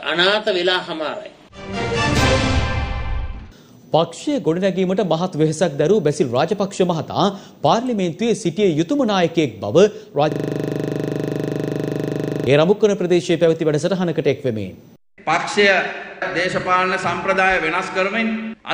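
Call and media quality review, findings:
System hang loop, 10.32–12.47 s. A 40 ms slice repeats at 25 Hz, a buzzing stutter. Driver or host froze; hardware kept replaying its 40 ms ring buffer.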